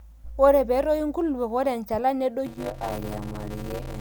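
It's a speech clip, and from about 2.46 s right through to the end it picks up a block size mismatch with zero padding. Each block gets a short silent gap tacked on, so there's a steady 100 Hz buzz riding on the speech, and everything from that point plays at about 0.53 times normal speed while the timbre stays the same. That ratio points to a stage writing 256-sample blocks into one that reads about 480 at a time.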